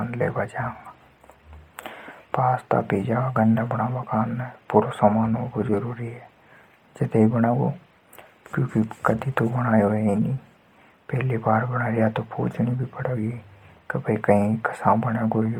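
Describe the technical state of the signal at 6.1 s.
At 6.1 s the speech has a breathy, grainy edge, its upper spectrum thinned and replaced by a hiss-like fill, as it is throughout the clip. This is likely heavy Bluetooth LC3 compression, a transform codec whose coarse coding points to roughly 32 kbps with 10 ms frames.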